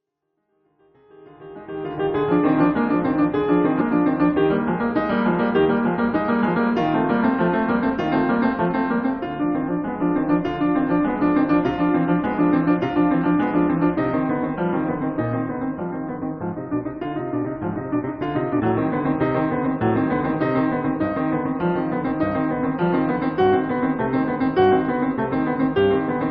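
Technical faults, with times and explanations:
3.80 s and 18.59–18.61 s: damaged data in a compressed stream. Each is a tiny chirp or squawk, no more than about 20 ms, that cuts abruptly through the music and is gone just as quickly. At these points some bytes of the compressed file were corrupted, so the decoder misread the affected frames and lost sync. It produced a burst of garbled output while searching for the next valid frame header, then recovered.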